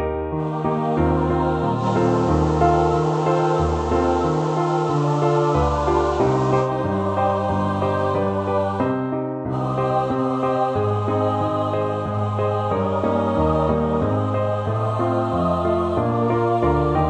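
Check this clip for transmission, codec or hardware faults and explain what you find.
One transmission fault is present: a digital radio blend to analogue, from 1.74 s to 6.72 s. The hybrid receiver lost its digital stream and cross-faded over about 121 ms to the station's FM broadcast, returning the same way at the end. While on FM, the level shifts by about 2 dB, and a steady hiss rises to roughly 25 dB below the signal.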